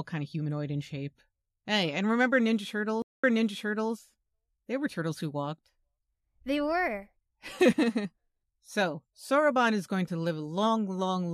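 At 3.02 s the speech stops dead. This is a stream reconnect. The connection dropped and the player lost its place. About 0.2 s of silence follows while it reconnects. A fresh decoder then picks up the stream mid-flow. Playback resumes about 0.7 s earlier than where it broke off, so a short stretch of speech is heard twice. The server resent a burst of recent audio, causing the jump back. The disturbance runs until 3.92 s.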